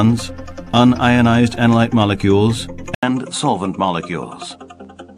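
At 2.95 s the audio drops out for about 80 ms, then resumes with a changed character through the end at 5.17 s. The likely cause is an input switched to a poorer device partway through the recording. After the gap, nothing is present above 10.5 kHz, so the top end sounds duller. The level sits a few dB lower, and a different background noise floor appears, roughly 50 dB below the signal.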